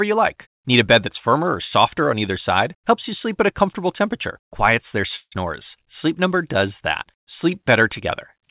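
At 5.16 s the speech halts for about 0.18 s in a call audio freeze, likely from delayed packets emptying the jitter buffer. The last sound is stretched into a fading buzz ending in 50 ms of silence. On a spectrogram, smeared horizontal bands fade to a blank strip below the 4 kHz ceiling, and the speech then resumes intact, 156 ms late.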